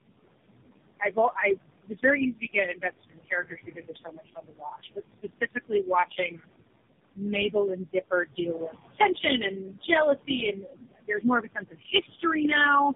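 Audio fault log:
throughout: noise suppressor artifacts. The room noise sits about 12 dB below the speech. The suppressor pulls it down by about 21 dB frame by frame. So the background sinks in pauses and swells under speech.
throughout: tandem speech coding. The sound has been narrowband coded several times over, which points to a chain of three speech coders, likely AMR-NB, then GSM full rate, then AMR-NB again. Each one re-codes the last one's errors. Nothing is left above 3.6 kHz. Speech is rough, muffled and warbly.
2.37–6.48, 7.13–8.38, 9.51–9.83 and 10.27–12.23 s: speech cut by the noise suppressor. Parts of the speech were taken for noise and turned down, by about 21, 22, 13 and 21 dB. About two seconds are hit in the first run, and about one second in the last. The two middle runs lose well under half a second each. Those parts sound swallowed or faint.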